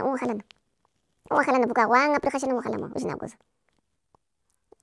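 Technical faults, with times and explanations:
Throughout, wrong sample rate: the speech runs 1.5 times fast and sits about 7 semitones high, which fits 16 kHz audio played at 24 kHz without conversion.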